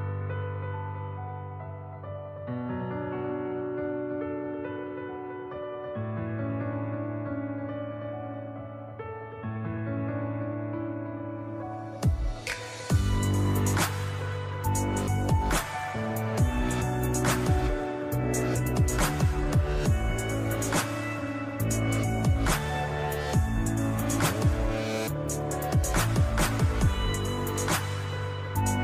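Nothing in the audio stood out as a technical problem on listening.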